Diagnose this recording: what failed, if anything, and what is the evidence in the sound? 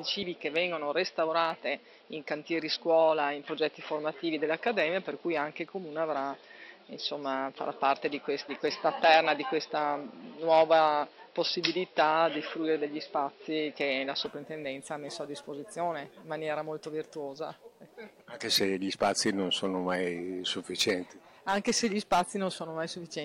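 From 0.00 s to 14.26 s the sound is dull and boxy, with nothing above 5.6 kHz and a faint, different noise floor. At 14.26 s it clears, with no gap, and the level shifts a few decibels. Likely an input switched to a poorer device at the driver stage.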